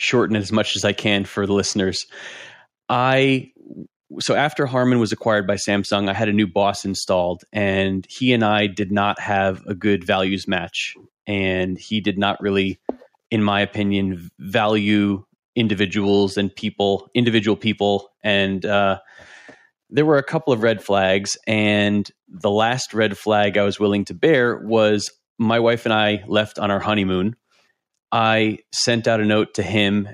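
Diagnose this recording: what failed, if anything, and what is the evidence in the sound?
Nothing failed; no faults audible.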